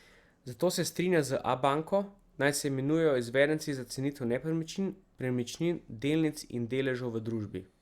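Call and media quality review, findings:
Nothing stood out on listening to the speech in this recording.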